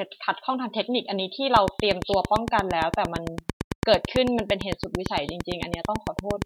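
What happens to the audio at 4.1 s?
At 4.1 s the speech sits inside a train of clicks that runs from 1.56 s to 6.43 s. Near-identical sharp pulses arrive at a steady 8.86 per second, around forty in all, and peak well above the speech level. They are heard as an even ticking laid over the speech and through its pauses. The regular spacing and matching shape point to a repeating external pulse, likely electrical interference or a faulty connection or power supply.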